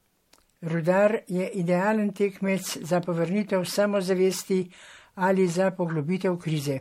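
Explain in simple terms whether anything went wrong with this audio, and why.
Something did go wrong, and it lasts for the whole clip. The speech sounds swirly, hollow and smeared. The starts of sounds are blurred rather than crisp, and there is nothing above 16.5 kHz. This is generation loss. The likely cause is that the audio was squeezed into MP3 and unpacked again about four times. Each round throws away slightly different detail, so the damage piles up.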